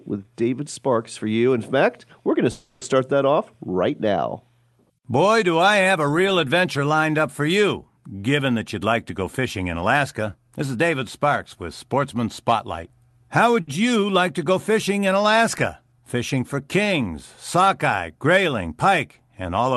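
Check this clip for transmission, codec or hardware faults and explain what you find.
Three kinds of transmission fault show up in this speech recording, all from the network and jitter buffer rather than the codec or hardware. The Opus call path behind them cuts the top end off at 12 kHz and adds its usual coding noise consistent with a rate around 32 kbps.

From 2.51 to 2.83 s there is a call audio freeze. Packets were likely held up in transit, leaving the jitter buffer empty for about 300 ms. After "fact we're going to", the last sound is drawn out into a fading buzz or hiss. Speech then resumes at "start that" exactly where it left off. Nothing is lost, but the pause is unnatural and everything after it runs 300 ms later.

From 8.56 to 10.77 s there is a jitter buffer speed-up. After the delay, the buffer held more audio than its target. To catch up, the receiver repeatedly cut out tiny pitch-period slices, about 150 ms in total. 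The voice keeps its pitch but runs about 6% fast, so the delivery sounds slightly rushed.

The same jitter buffer speed-up happens again from 19.08 to 19.70 s, right after "for kings sockeye grayling". Here it removes only about 50 ms, so the hurried quality is briefer.

From 13.61 to 13.80 s there is a short stall from a late packet. One packet arrived after its playout time, so the buffer stretched the current sound by about 60 ms to cover the gap. The result is a held syllable with a slight buzz or dip just before "you like to go". The speech then continues with nothing missing.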